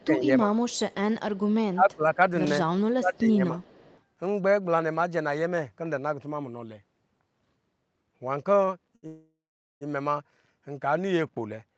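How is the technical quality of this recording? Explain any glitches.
The recording has several call glitches. They cluster in the first four seconds and again between 8.65 and 9.83 s. The audio is speech carried over a call, with nothing above 8 kHz, which fits a wideband Opus link at a modest bitrate.

Speech suppressed in double talk occurs from 0.00 to 0.52 s, 1.72 to 2.18 s and 2.89 to 3.60 s. The voice sinks by about 20 dB in the first two stretches and about 15 dB in the third. The dips last a few hundred milliseconds each. The likely cause is both ends talking at once. The echo canceller could not tell the local talker from loudspeaker echo, so it turned everything down.

An echo leak is heard from 0.59 to 0.95 s, briefly at 1.36 s, and from 3.61 to 4.02 s. A faint copy of the voice trails the original by 289 ms. It sits about 30 dB below the speech, so it comes across as a faint after-image. 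Residual echo from a loudspeaker at the far end is the likely source. Its echo canceller let part of the pickup slip back into the call.

Two short stalls from a late packet follow. The first, at 8.65 s, holds the sound for 16 ms. The second, from 8.95 to 9.05 s, holds it for 73 ms. Each time a packet missed its slot and the jitter buffer ran dry. The receiver stretched the last sound until the data arrived. Nothing is lost, but the sound is briefly held too long.

A call audio freeze runs from 9.07 to 9.83 s. The sound is held and stretched for 742 ms. It fades out, and about 430 ms of that is silence. Then the speech resumes exactly where it stopped. Nothing is missing, but a gap now interrupts the flow. The likely cause is packets held up in the network long enough to empty the jitter buffer.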